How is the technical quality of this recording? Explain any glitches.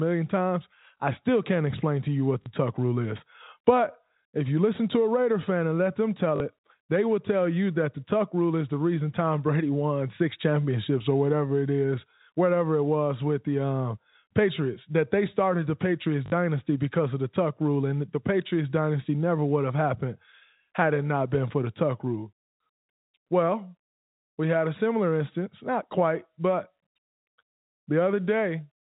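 The recording has three brief glitches from packet loss with the last packet repeated. It travels as G.711 telephone coding, so no content above 4 kHz is present.

At 2.42 s, after "explain to you what", 40 ms goes missing. At 6.36 s, after "fan and let them" and before "it they will tell", another 40 ms goes missing. At 16.26 s, just before "because of the", 60 ms is lost. The gap lengths fit runs of 20 ms packets. The receiver replays the last good packet until fresh audio arrives. Each gap is heard as a short robotic stutter.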